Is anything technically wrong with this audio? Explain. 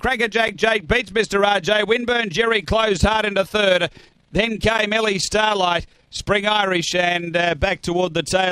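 Yes. Overlap-add ripple runs throughout: windowed frames were rejoined without constant summed gain, so level pulses by about 6 dB roughly 30 times a second, a rough fast flutter.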